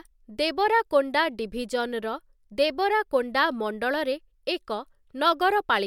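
No technical faults can be heard anywhere in the recording; the signal stays steady and intact throughout.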